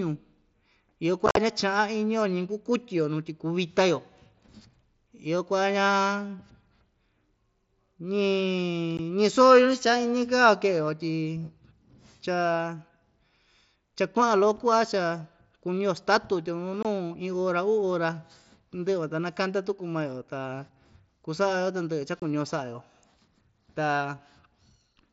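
Speech over a Bluetooth headset with unconcealed Bluetooth headset packet loss: hard-edged gaps at 1.26–1.37 s (about 75 ms missing in chopped bits, longest 45 ms), 8.97 s, 16.83–16.85 s between "statu tya nu" and "iin ora", and 22.20–22.22 s. These are dropped link packets filled with silence, over a wideband mSBC link.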